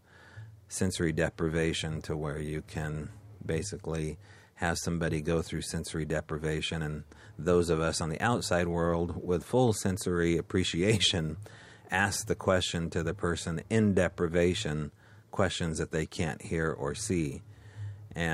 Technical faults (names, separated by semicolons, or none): none